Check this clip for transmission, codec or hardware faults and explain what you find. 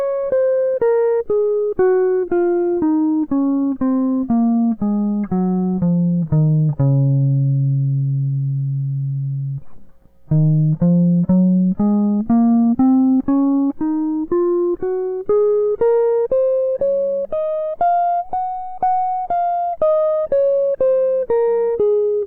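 No faults turn up anywhere in this music clip.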